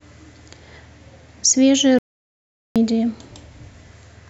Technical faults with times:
1.99-2.76 playback stall

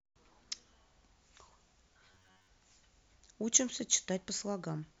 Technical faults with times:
2.05-2.48 robotic sound from repeated short buffers

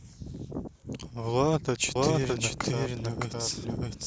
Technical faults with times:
1.95-4.06 doubled audio track

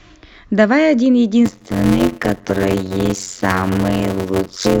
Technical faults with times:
1.45-4.80 block size mismatch (padded)
2.49 damaged data in a compressed stream
4.65-4.67 damaged data in a compressed stream

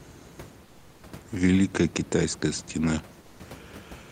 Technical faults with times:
0.65-1.03 comfort noise in place of the background
3.21-3.39 comfort noise in place of the background

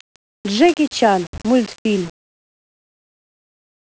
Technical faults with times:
0.00-3.92 low bit depth without dither
0.58-0.73 loose connector crackle

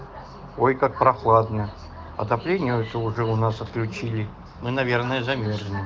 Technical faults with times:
none

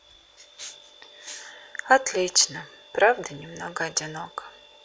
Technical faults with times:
none

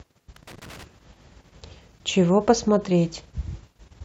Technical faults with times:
0.36-0.84 loose connector crackle

